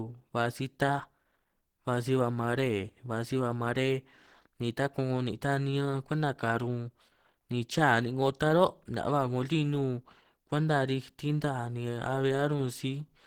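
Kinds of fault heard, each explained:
Opus compression: The speech was likely encoded with Opus at a low rate, about 16 kbps, in its hybrid speech mode. Sparse bits leave upper bands filled with folded energy and noise, so the speech sounds plainly muffled, hoarse and grainy, though content still extends up to about 20.2 kHz.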